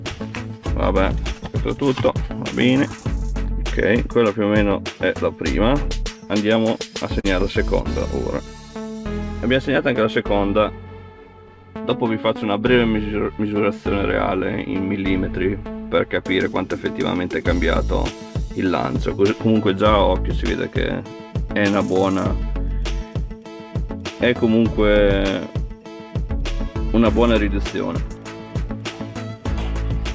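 The audio comes through a VoIP call link whose spectrum stops at 8 kHz, which fits G.722 wideband coding. There is one instance of short concealed packet loss, from 7.20 to 7.26 s. About 40 ms of audio failed to reach the decoder in time, and the receiver covered roughly 37 ms of the gap by extending the preceding sound before crossfading back into real data. The result is a brief smear or wobble at that point.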